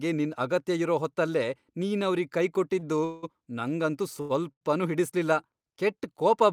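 Just after "ಇರೋ ಹೊತ್ತಲ್ಲೇ ನೀನವ್ರಿಗ್", from 2.79 to 2.84 s, a sound is held about 29 ms too long with a faint buzz or dip. This is a short stall from a late packet: the jitter buffer ran dry, and the receiver stretched the last sound until the packet arrived. From 3.04 to 3.25 s comes a call audio freeze. The sound hangs as a fading buzz or hiss for about 184 ms without dropping to silence. The likely cause is packets held up in transit, which let the buffer run empty. Further short stalls follow at 4.21 to 4.32 s and 4.52 to 4.63 s, holding a sound for about 89 and 96 ms. In every case the audio resumes where it stopped, so a delay is inserted and nothing is lost.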